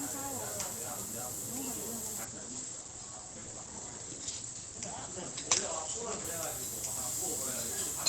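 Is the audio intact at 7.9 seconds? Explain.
Yes, the audio is intact at 7.9 seconds, with no fault at that moment.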